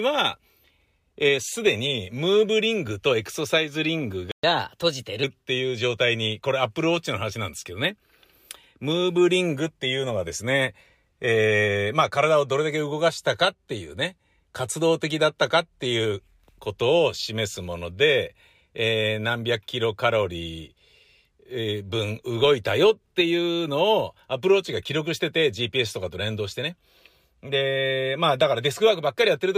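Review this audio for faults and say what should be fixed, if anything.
At 4.32 s the speech cuts to silence for 120 ms, then resumes at 4.44 s exactly where it left off. This is a playback stall, likely the player's buffer running dry or its audio thread being held up. Unlike a dropout from packet loss, nothing is skipped and there is no concealment smear, just a gap followed by continuous speech. Larger buffering and keeping the audio thread free of blocking work would prevent it.

From 4.44 s to 5.24 s the speech plays about 1.15 times too fast, raising the pitch by roughly two semitones, before settling back to normal. This is catch-up at higher speed: the player resamples its backlog to recover the 120 ms lost in the stall. Time-stretching would change tempo alone, but here pitch and speed rise together and only directly after the silence. Pitch-preserving time-scale modification, or a gentler catch-up rate, would prevent it.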